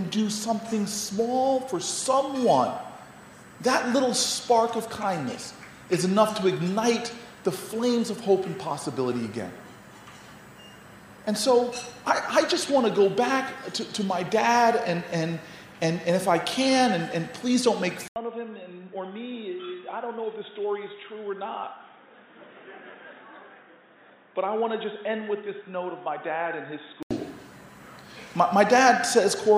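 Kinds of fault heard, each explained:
Input switched to a poorer device: From 18.08 s to 27.11 s the audio drops out for about 80 ms, then returns band-limited, with nothing above 3.8 kHz, roughly 10 dB quieter, and carrying a new noise floor around 40 dB below the signal. The sound turns dull and boxy for that stretch before clearing. This pattern is likely a mid-recording change of input to a narrower-band microphone or headset call profile.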